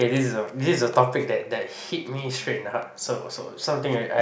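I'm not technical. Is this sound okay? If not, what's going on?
Yes, the sound is technically fine, with nothing in the recording that points to a fault in how it was captured or played back.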